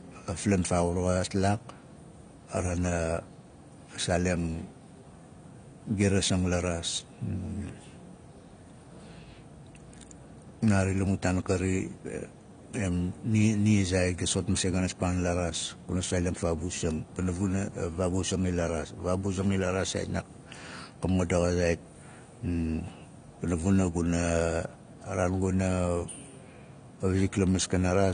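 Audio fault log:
throughout AAC compression: the speech is dull and smeared with nothing above 9.7 kHz, likely from AAC-LC starved of bits, fitting about 32 kbps, dropping highs and coarsening the rest.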